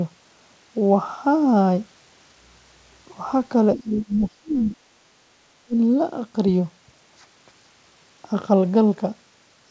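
From 3.75 to 4.79 s, the speech dips sharply, by up to about 25 dB, for roughly 0.7 s in total. It dips again briefly at 4.96 s, by about 20 dB, and from 5.65 to 5.75 s, by about 30 dB. These gaps sound like speech suppressed in double talk. Likely both sides talked at once, and the echo canceller treated the talker as echo and turned it down in pieces.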